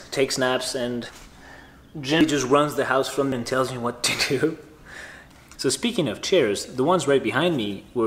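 Compressed frames skipped at 1.09, 2.21, 3.32 and 5.55 s: the audio jumps forward by roughly 300, 200, 300 and 200 ms, which fits two or three dropped frames of about 93 ms.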